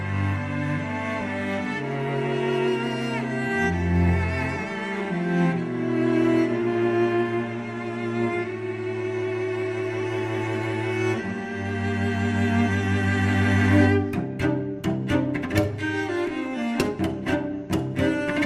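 Throughout, the sound is dull and gurgling, likely from MP2 compression at a low rate near 80 kbps: upper sub-bands flicker off and surviving bands turn granular, unlike a steady low-pass.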